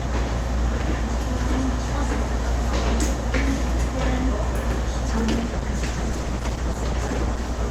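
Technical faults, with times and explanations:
5.08–7.65 s: call bitrate drop. The sound turns coarse and muffled, with the highs cut away. This fits the encoder dropping from about 64 to 13 kbps.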